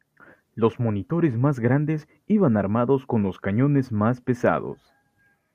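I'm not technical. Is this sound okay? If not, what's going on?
Yes, this speech recording sounds fine. I can't hear any technical problem in it.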